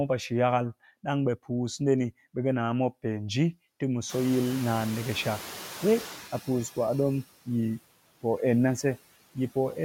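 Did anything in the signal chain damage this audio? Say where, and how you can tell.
Yes, the call processing stage. A noise suppressor is acting on the whole clip and produces noise suppressor artifacts. It applies a per-band gain frame by frame and pulls the steady noise down by about 15 dB. On a spectrogram the noise floor darkens between phrases and swells back under the speech.

The room noise itself steps up by about 20 dB at roughly 4 s, and the noise suppressor has to catch up. From 4.09 to 6.34 s the noise passes with only about 10 dB of cut. The suppressor's estimate takes 2.25 s to adapt. On the spectrogram that window shows a brighter noise floor that darkens at 6.34 s.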